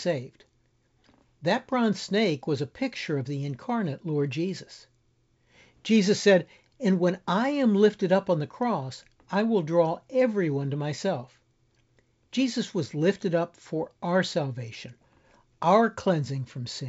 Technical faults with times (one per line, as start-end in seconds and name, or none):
none